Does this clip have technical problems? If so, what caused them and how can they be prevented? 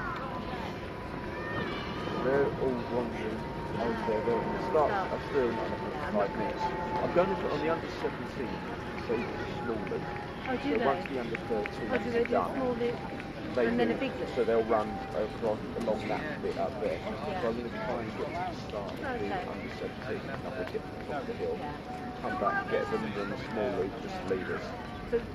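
No, there are no technical faults to point to in this clip. Nothing in it calls for a cause or a fix, so there is nothing to prevent.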